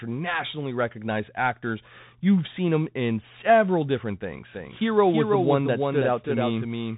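From the first moment the speech carries the marks of a Bluetooth CVSD headset codec, which codes each sample as a single up-or-down step at 64 kbps and adapts the step size. Nothing passes above about 3.8 kHz, but this is more than a simple low-pass. A granular hiss sits under the speech, s sounds come out scratchy, and loud bright moments smear where the step cannot keep up. That slope overload is what separates it from plain band-limiting.

At 4.53 s, just after "him in several different", a doubled audio track cuts in and runs to the end. A second copy of the speech trails the original by about a third of a second, roughly 5 dB quieter. It is likely a second capture arriving through a slower path. Unlike an echo or reverb, it repeats only once, never decays, adds no room colour, matches the original's tone, and begins abruptly rather than building up.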